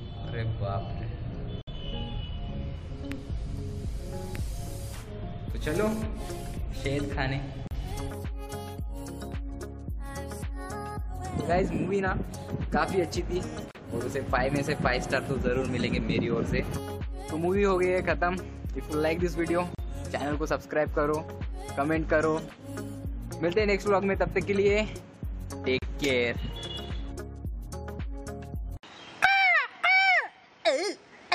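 Gaps at joins of encoded pieces open at 1.62 s (59 ms), then 7.67, 13.71, 19.75 and 25.79 s (37 ms each), every 6 s: encoder start delay and end padding left in. Unlike random dropouts, the regular spacing and unbroken continuation mark them.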